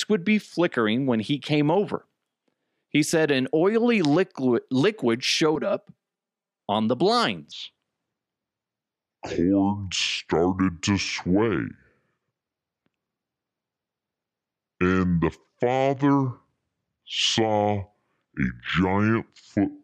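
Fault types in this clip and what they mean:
Channel delay (comb filtering): one channel arrives about 5 ms behind the other, and summed to mono the shared content cancels at evenly spaced frequencies starting near 100 Hz, giving the speech a hollow, phasey colour from 5.56 to 6.60 s. Unlike a speed fault, pitch and pacing stay untouched; only the tone changes, with fixed notches that sound like talking through a tube.
Section at the wrong speed: from 7.52 s to the end, the speech runs at 0.666 times its proper speed, so it drags and drops about seven semitones, turning deep and slow. The likely cause is playback or editing against the wrong clock. What sets it apart from comb filtering is that pitch and tempo shift together, while the tone colour itself is not hollowed out by notches.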